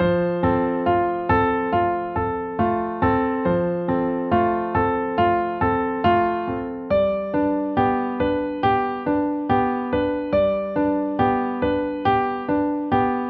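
No technical faults occur in this audio.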